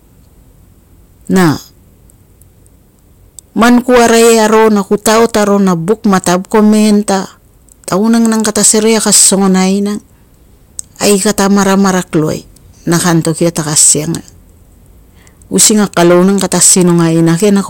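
From start to finish this speech is hard clipped, pushed about 18 dB past what the stage feeding it could pass. Every peak above the limit gets sliced flat, and roughly seven percent of the waveform ends up sitting on that ceiling. Those squared-off tops throw harmonics way up the spectrum, so instead of the odd crackle you get a harsh, buzzy fuzz riding on every loud syllable all the way through.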